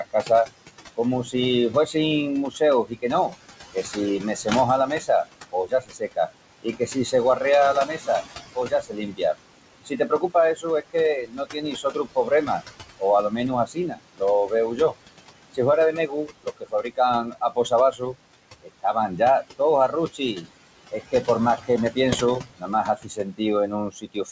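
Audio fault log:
Throughout: noise suppressor artifacts. The room noise, which sits about 12 dB under the speech, is pulled down by about 19 dB in the gaps and comes back up beneath each phrase. The suppressor decides band by band and frame by frame what counts as steady noise. Here the noise floor itself is pumping.
0.04–0.3 s, 0.97–1.95 s, 2.5–14.95 s, 15.54 s to the end: speech cut by the noise suppressor. Parts of the speech are turned down along with the background, by about 21, 13, 22 and 22 dB at the deepest points. The first run loses roughly a tenth of a second, the second about a fifth, and the long third run around three seconds spread across its span. Soft consonants and word endings sound swallowed. The gain cuts strike the speech itself, so the signal goes missing rather than just the noise around it, and the top stops near 8 kHz, which fits a wideband G.722 call path at 64 kbps.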